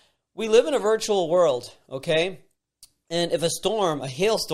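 Nothing in the speech stood out as a technical problem on listening.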